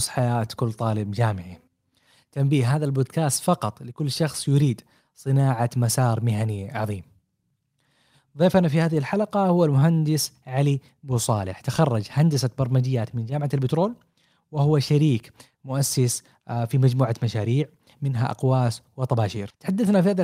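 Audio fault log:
Throughout: clock drift between sender and receiver. The sender's audio clock runs about 4 percent slower than the receiver's, so the jitter buffer keeps draining. The receiver must keep padding the stream, which leaves small timing hiccups recurring at uneven intervals across the whole clip.
0.21 to 20.03 s: repeated timing corrections. To keep pace with the slower sender, the receiver repeatedly repeats short pieces of the speech, all in the same direction. This stretches the stretch to a 96 percent speed, adding about 0.7 s, with the repeats unevenly spaced.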